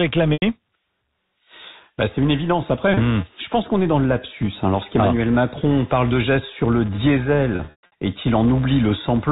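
Throughout the speech, a filter restarted on every block adds a level-following buzz at 188 Hz, which fits a 256-sample buffer. On a spectrogram it shows as evenly spaced vertical ticks. Packet loss with pitch repetition then hits at 0.33 to 0.42 s (90 ms), at 2.94 s after "bah c'est une évidence" and before "hmm je pense qu'on" (30 ms), and from 7.56 to 7.92 s (240 ms lost in scattered runs up to 120 ms). The short gap sounds held and buzzy, while the longer ones fade into silence as the repeated pitch cycles die away. On a waveform it looks like identical repeating periods tapering toward silence.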